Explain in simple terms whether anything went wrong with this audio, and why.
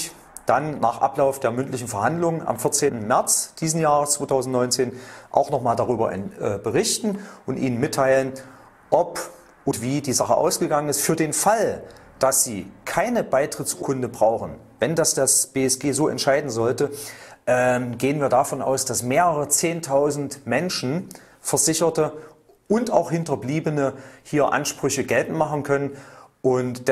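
The sound jumps forward three times, at 2.87 to 2.90 s, at 9.70 s and at 13.81 s. Each time a slice of audio is cut out: about a tenth of a second at the first two spots and a bit more at the third. These are compressed frames skipped. The file stores audio in small blocks, and a handful went missing or were rejected as damaged, so playback leapt past them.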